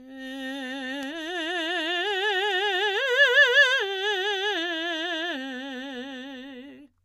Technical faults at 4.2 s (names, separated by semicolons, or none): none